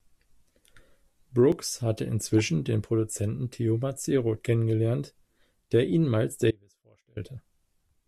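From 1.52 s to 7.52 s, periodic USB or driver dropouts skip a couple of milliseconds every 2.0 s. Each sounds like a regular tick.

At 6.51 s the speech drops out to a faint residue for 0.66 s, leaving a trace roughly 30 dB down until 7.17 s. A likely cause is a signal break.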